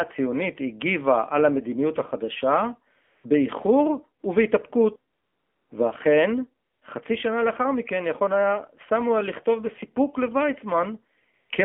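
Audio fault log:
Throughout: AMR narrowband mobile codec. The speech is confined to roughly 200 Hz to 3.4 kHz, with plainly audible buzzy, synthetic coloration from coarse pulse-excited vocal-tract modelling. The degree of damage fits a low AMR-NB mode around 7.4 kbps.
3.04–3.24 s, 5.14–5.70 s, 6.66–6.82 s, 11.34–11.50 s: AMR comfort noise. In these gaps of 200, 560, 160 and 160 ms, speech frames stop and a smooth, steady synthetic hiss replaces the real background. It switches in and out abruptly at each boundary.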